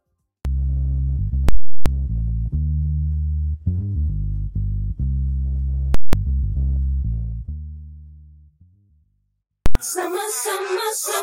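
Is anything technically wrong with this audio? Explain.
Yes, there are three invalid numbers at full scale bursts, at 1.49–1.86 s, 5.94–6.13 s and 9.66–9.75 s. A calculation produced infinite or invalid values that were pinned to full scale. Each burst gives a loud pop, silence, then another pop, or a single bang where the block is short. The bursts shrink from 0.37 s to 0.19 s to 0.09 s, which fits blocks of 16384, 8192 and 4096 samples.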